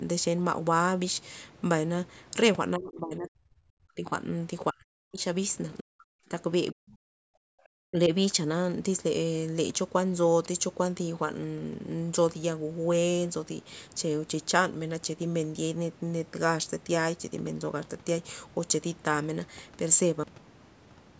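An echo canceller that most likely could not tell the near talker from loudspeaker echo during double talk turned both down. This is speech suppressed in double talk: the speech sinks by about 40 dB at 2.76–4.11, 4.72–5.2, 5.81–6.32 and 6.72–7.32 s, and by about 25 dB at 7.9–8.12 s.

The final buffers were never written or played, giving a cut-off end at 20.24 s. The speech stops mid-sound and falls straight to digital silence with no natural decay, and that silence runs to the end of the clip.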